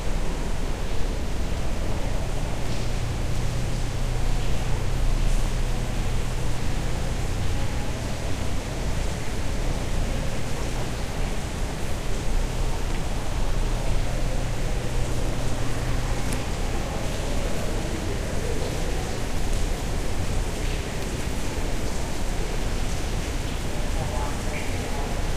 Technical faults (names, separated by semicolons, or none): none